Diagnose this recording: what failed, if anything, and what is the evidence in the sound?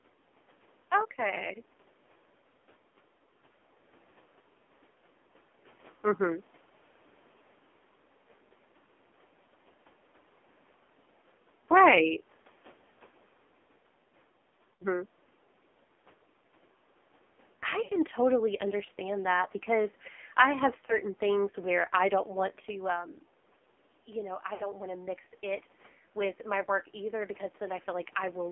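The codec stage failed. The speech was carried through the AMR narrowband mobile codec at a very low bit rate, heavy enough that it points to one of the lowest AMR-NB modes, around 5.9 kbps. The line band runs only from about 250 Hz to 3.5 kHz, so there is no real bass and no sibilance. With so few bits for the pulse excitation, the vocal-tract model leaves the voice buzzy, thin and synthetic for the whole clip.

At the radio or network stage, lost AMR speech frames failed their checks, and the decoder filled the gaps by reusing the last good pitch and spectral settings while lowering the gain. There are gaps at 14.75 to 14.84 s; at 17.84 to 17.93 s, just before "totally understand that because"; at 20.86 to 20.99 s, between "that because I have" and "things where I don't"; and at 24.54 to 24.67 s. The 60 ms gaps smear and fade before the voice returns rough. The short 20 ms one is just a brief warble.

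In the call processing, automatic gain rising begins at 22.66 s, right after "where I don't want", and continues to 28.47 s. The talker moves away around 22.5 s, and the input falls by about 11 dB. The gain control answers by slowly adding about 6 dB, so the voice and the room noise swell together over several seconds. The level recovers only partly.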